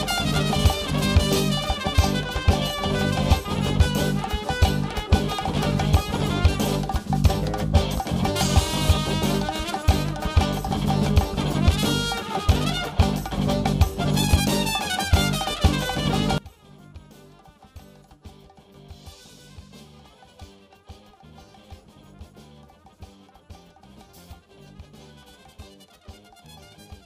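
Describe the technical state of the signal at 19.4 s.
At 19.4 s the signal sits inside a stretch from 16.38 s to the end of the clip where the level collapses by about 25 dB and only a faint residue of the sound remains. The likely cause is one channel inverted: with one side's polarity reversed, everything common to left and right cancels on a mono sum, so centred content and low end all but disappear, leaving just the inter-channel difference.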